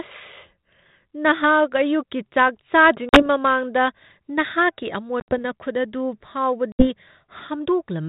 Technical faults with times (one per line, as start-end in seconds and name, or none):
3.09-3.27 packet loss on an ADPCM call
5.20-5.42 packet loss on an ADPCM call
6.72-6.89 packet loss on an ADPCM call